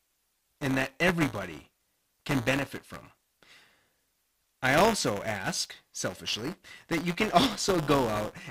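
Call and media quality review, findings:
Buffer tearing, whole clip. Write and read pointers in the playback ring buffer have slipped and cross every period. A small slice of each buffer replays audio about 10 ms stale, with hard joins. Result: robotic 172 Hz buzz riding the speech, which fits a 256-sample buffer.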